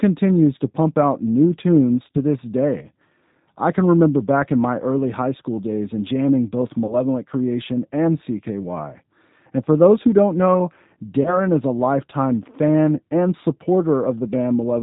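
From start to finish the speech carries the damage of the G.729 codec, running at 8 kbit/s. It rebuilds the signal from a vocal-tract filter, a pitch predictor and a handful of pulses per frame. Nothing above about 4 kHz survives, so the sound is band-limited and muffled, and the voice has a plainly audible rough, slightly synthetic grain.

VoIP packet loss concealed by the speech codec occurs three times. At 2.12 to 2.18 s, after "pump out new tunes" and before "this day", at 6.87 to 6.96 s, after "days and jamming both", and at 11.23 to 11.39 s, between "those who don't know" and "is a lifetime fan". Each gap fits a single missing 20 ms packet. The decoder filled it by extending its last pitch and filter while lowering the gain, which stretches the sound into a buzzy tone or coloured noise that fades. Because each frame is predicted from the one before, the voice stays weakened or distorted for tens of milliseconds or more after the gap.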